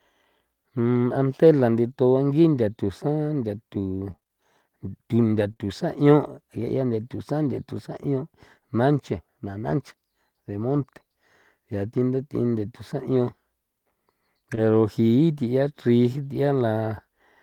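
Speech clip with Opus packet-loss damage of three kinds. Lost packet rebuilt from error correction occurs at 0.95 s (just before "ante la"), 10.69–10.83 s, 13.11–13.17 s, 14.57 s and 16.35 s. The 10.69 s stretch holds about 80 ms of rebuilt audio, from four separate lost packets. Low-bitrate backup copies carried in the following packets fill each hole, so the sound stays continuous but turns briefly rough and noisy. On a spectrogram these spans show grainier, smeared harmonics with no gap. Repeated packet loss (robotic sound) runs from 4.07 to 5.61 s. Seven separate holes, the longest 23 ms and about 140 ms in total, are each patched by extending the preceding sound, giving a choppy texture. A spectrogram shows repeated short blurred or frozen slices across that second and a half. Short concealed packet loss hits 14.55–14.59 s, where about 20 ms never arrived in time. The decoder extrapolated the prior sound and crossfaded back, producing a brief smear or wobble. 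It overlaps the rebuilt packet at 14.57 s and appears on the waveform as a small, oddly regular patch.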